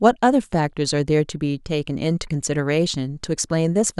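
Speech recording with no technical faults to report.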